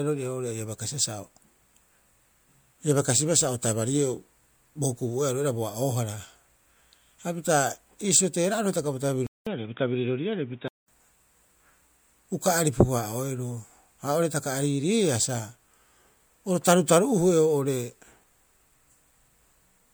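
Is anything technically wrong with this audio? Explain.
Yes. From 9.27 to 10.88 s the speech turns dull and boxy, nothing above 3.8 kHz, after a short gap of 200 ms, with a new background noise about 45 dB down and the level roughly unchanged. The likely cause is an input switched to a poorer device, narrower in band and with its own tone and noise.

At 9.44 s an attack is preceded by a brief hiss spread over 22 ms, softening its onset. This is pre-echo: the codec spread quantisation noise across its whole block, so noise sized for the loud attack leaked into the quiet moment before it.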